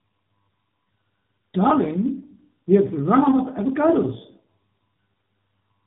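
Throughout, tandem speech coding: G.723.1 output re-coded by AMR-NB compounds both codecs' damage, leaving rough, muffled, warbly speech with nothing above 3.8 kHz.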